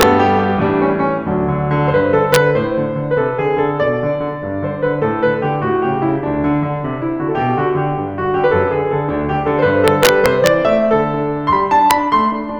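A music clip with integer overflow. Loud peaks wrap to the opposite sign instead of being limited, causing violent cracks sharper than clipping. They fall at 0.01 s, 2.34 to 2.36 s, 9.88 to 10.47 s and 11.91 s. Overdrive reaches about 4 dB.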